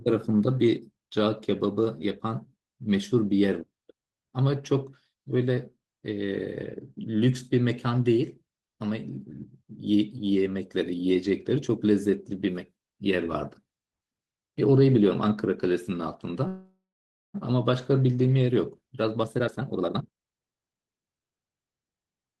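Speech clip with a call audio freeze from 16.47 to 17.36 s: the sound stretches into a fading buzz, then about half a second of silence, and resumes with nothing lost, likely from delayed packets draining the jitter buffer. From 18.52 to 21.41 s a jitter buffer speed-up plays the speech at 130% speed with unchanged pitch, trimming roughly a second of backlog and sounding hurried.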